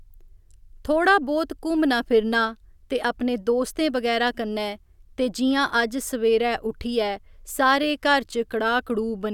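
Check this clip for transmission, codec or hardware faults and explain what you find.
No faults turned up on checking this clip.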